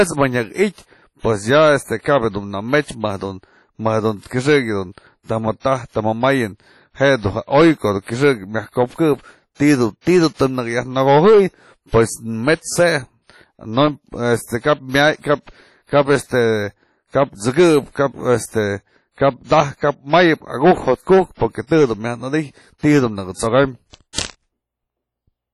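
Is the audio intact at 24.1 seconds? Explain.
No. From 24.13 to 24.18 s there is pre-echo: the transform codec spread quantisation noise across a block of about 51 ms, so a short hiss creeps in before the attack and softens it. Throughout, the sound is ringing and washy, with nothing above 13.5 kHz and hiss that breathes with the signal, likely from heavy WMA compression at a bitrate low enough to suggest about 32 kbps.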